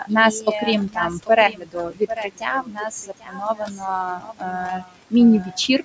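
Across the whole clip the speech is heard twice: a second, full-band copy trails the original by roughly 0.7 s at about 10 dB lower, with no reverberant tail or room colouring and with abrupt edges where it enters and leaves. This doubled audio track points to the same signal reaching the mix by a second, slower route, likely a capture path picking up the output again. The result is a distinct, dry echo of every phrase rather than a reflection.

Also present throughout are noise suppressor artifacts. The suppressor pulls the room noise, which sits about 17 dB below the speech in a band that stops at 8 kHz, down by about 19 dB in the gaps, then lets it come back under each phrase. The background therefore pumps in and out with the speech.

The same suppressor also makes speech cuts, treating parts of the speech as noise and attenuating them: 0 to 0.12 s (about 17 dB), 0.32 to 0.68 s (about 12 dB), 0.86 to 1.3 s (about 18 dB), 1.49 to 3.85 s (about 22 dB, around 1.5 s affected in total), 4.15 to 5.13 s (about 22 dB) and 5.41 to 5.81 s (about 12 dB). 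In these stretches consonants, word tails and softer syllables sound faint or swallowed.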